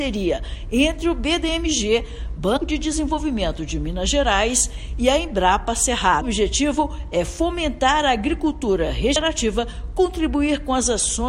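Damaged data in a compressed stream causes three brief blips in this audio, at 2.56–2.58 s, 6.20 s and 9.15 s, where the decoder misreads corrupted frames and loses sync. Each appears as a narrow vertical smear across the spectrogram and a short, ragged disturbance in the waveform.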